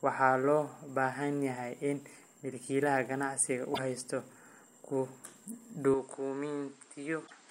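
Corrupted bytes in the compressed speech stream make the decoder misread frames and hunt for the next frame header, so just after "milkiilaha ganacsiga", from 3.71 to 3.79 s, a brief glitch breaks through. From 5.94 s the input was likely switched to a poorer device. With no gap at the switch, the speech turns duller and boxier, loses everything above 9.6 kHz, drops a little in level, and gains a new noise floor around 30 dB below the speech. From 7.24 to 7.31 s the same damaged data in the compressed stream returns as a second brief glitch.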